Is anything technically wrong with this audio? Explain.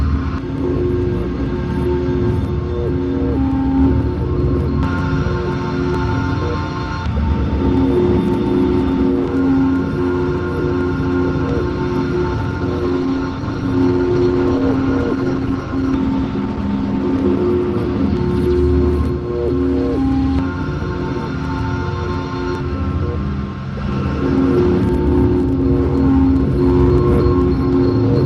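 Yes. From 12.35 s to 18.09 s there is a call bitrate drop. The encoder falls from 32 to 14 kbps for about 4.9 s, coding coarsely and narrowing bandwidth from 20 kHz to 12 kHz. The audio turns muffled and watery, and a spectrogram shows everything above 12 kHz going dark.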